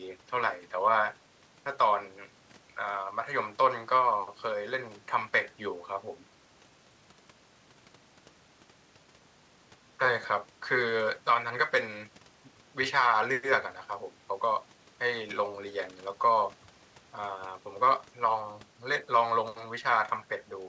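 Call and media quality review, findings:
No faults found: the speech carries the expected signature of a wideband WebRTC call path, with nothing above 8 kHz, which fits G.722 coding at 64 kbps.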